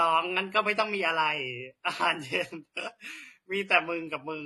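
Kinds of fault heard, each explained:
Transcoding between lossy codecs: The speech was likely compressed more than once, and the artefacts point to an MP3-type coder followed by a low-rate HE-AAC-type one. The second coder spends its limited bits re-encoding the first coder's damage and adds its own. Throughout the clip nothing reaches above 12.6 kHz, so the top end sounds dull. A smeared, warbly quality and a grainy, swirling texture are heard together rather than as one consistent coloration.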